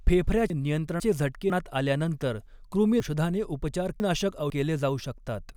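Between 0.5 and 1.5 s the speech briefly jumbles as half-second pieces play in the wrong sequence: chunks out of order. The piece that belongs at 0.5 s arrives one chunk late, so the following 500 ms plays first. The same happens from 3.0 to 4.5 s, where the first 500 ms piece lands two chunks late. Nothing is missing, but each swap leaves three hard joins.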